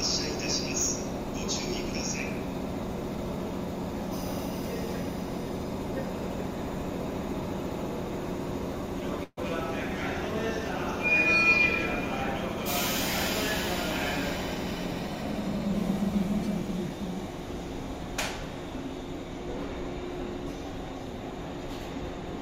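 The audio stalls at 9.23 s into a brief buzz or hiss that fades and ends in about 30 ms of silence, then resumes at 9.39 s exactly where it stopped. This call audio freeze likely came from held-up packets draining the jitter buffer, so 137 ms of filler was inserted, nothing was lost, and delay grew by 137 ms. From 14.54 s to 16.9 s the audio runs faster at unchanged pitch, about 104% speed. This jitter buffer speed-up trims short pitch-period pieces repeatedly, removing roughly a tenth of a second to reduce excess buffered delay.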